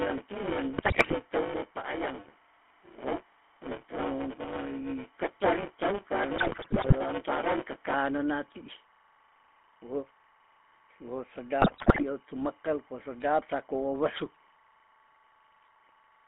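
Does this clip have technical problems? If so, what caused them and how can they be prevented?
Yes. Four kinds of fault are audible in this speech clip.

Timecode bleed runs through the whole clip. A chirping warble sits behind the speech, roughly 30 dB down, flipping between tones near 1 kHz and 2 kHz. Its rhythm fits 25-frames-per-second linear timecode, whose square-wave code has leaked from an adjacent track or cable into the audio path. To prevent it, keep timecode on separate, well-shielded cabling and tracks, away from audio lines, and check crosstalk before recording.

The GSM full-rate codec shapes the entire clip. Audio is confined to roughly 200 Hz to 3.5 kHz, and the speech carries the buzzy, gravelly texture of a vocal-tract model driven by a sparse, regular pulse excitation. This plainly audible coding damage fits 13 kbps full-rate GSM. To prevent it, capture or route the call through a wideband codec such as AMR-WB or a higher-quality path, rather than a legacy full-rate GSM link.

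Buffer tearing runs from 0.00 s to 7.95 s, ending just before "ti ih". A robotic buzz at 200 Hz rides on the speech and appears only where there is signal. The writer and reader of the ring buffer have drifted so that they cross within each period, leaving roughly 40% of every buffer filled with audio about 15 ms stale and butted against fresh audio with hard joins. To prevent it, use larger buffers and correct write-pointer scheduling so the writer always stays a full period ahead.

GSM bit errors occur at 0.76–1.15 s, 6.36–6.93 s, and 11.60–12.03 s, the last ending just before "tu mekel ko sedap". In these stretches the speech breaks into squawks, pops and gargling. Corrupted filter, pitch and gain parameters distort the spectrum or spike the level frame after frame while each bad patch lasts. The density points to an error rate of a few percent on a weak radio link. To prevent it, ensure adequate signal strength or use a channel with stronger error protection and concealment.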